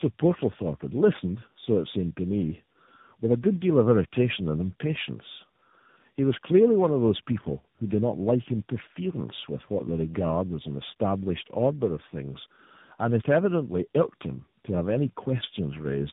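Speech throughout shows tandem speech coding: it is rough, muffled and warbly, with nothing above 3.8 kHz. That fits a chain of narrowband codecs, with low-rate AMR-NB at each end and G.711 and CVSD legs between, each re-encoding the previous stage's damage.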